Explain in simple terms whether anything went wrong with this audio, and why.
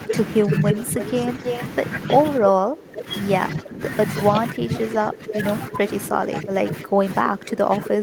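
Speech suppressed in double talk happens four times. From 0.06 to 0.99 s the voice dips slightly. From 2.4 to 3.08 s and from 3.55 to 3.81 s it drops sharply. From 4.32 s to the end it sinks noticeably. The likely cause is that both sides of the call talked at once. The echo canceller could not tell this voice apart from the returning echo, so it turned everything down.

Echo leak appears three times. From 0.08 to 1.59 s a fairly loud copy of the voice follows it about 0.31 s behind. At 2.96 to 3.02 s there is a faint scrap of echo, about 0.31 s late. From 5.13 to 5.39 s a softer copy trails by about 0.32 s. This is likely a loudspeaker on the far end whose sound reached its microphone and was not fully removed, so it came back.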